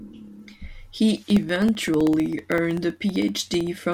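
From 1.17 s to 3.93 s, periodic USB or driver dropouts occur: something blocking the USB bus or audio driver interrupts the stream every 64 ms, and each time about a millisecond of audio is lost and replaced with silence. Across the rest of this speech clip that adds up to around forty tiny gaps, heard as a steady train of ticks riding on the speech, audible only where there is signal beneath them.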